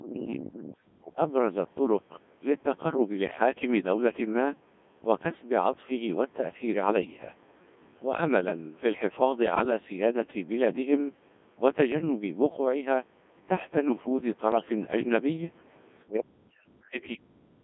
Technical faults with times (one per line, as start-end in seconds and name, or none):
0.00-17.64 Codec 2 vocoder
0.55-0.75 other side's voice leaking through
0.87-1.05 background gated by the echo canceller